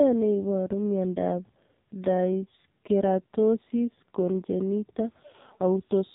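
From start to finish the speech carries AMR narrowband mobile codec damage, and it is heavy. Nothing is left above 4 kHz, and the very low bitrate, which fits roughly 5.9 kbps, makes the voice buzzy and synthetic. On a spectrogram the energy stops flat at a 4 kHz ceiling, and the harmonics look smeared.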